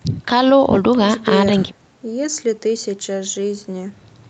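No technical faults are audible.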